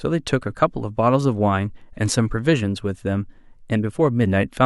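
Sample clock jitter runs from 2.88 to 4.38 s. The converter's timing wobbles by about 0.7 microseconds RMS, so each sample is captured slightly early or late. Where the speech waveform changes quickly, those small timing slips become amplitude errors. The result is a faint hiss and roughness, roughly 55 dB below the speech, that rides on louder and brighter syllables and drops away in the pauses.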